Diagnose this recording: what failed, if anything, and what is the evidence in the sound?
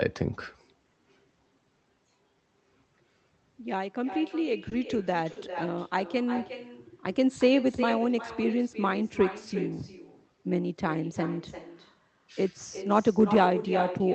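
Call processing: an echo with no canceller runs throughout. Every phrase comes back about 11 dB down, roughly 400 ms later, and thin: the far-end loudspeaker feeding its microphone.

Network and jitter buffer: two short stalls from late packets, at 4.69 to 4.74 s and 5.32 to 5.39 s. The buffer ran dry and stretched sound by 20 and 40 ms, with nothing lost.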